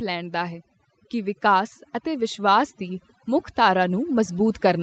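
Overdone noise removal runs through the whole recording: a noise reducer set far too aggressively shuts off individual frequency bands whenever they sit close to its noise estimate, taking quieter parts of the speech with them. The background drops and breaks up into twinkling specks.

Automatic gain rising starts at 0.05 s and continues to 4.82 s: the gain control judged the input too quiet and kept raising its level, so speech and background swell together steadily over several seconds. The call microphone processing caps the audio at 8 kHz.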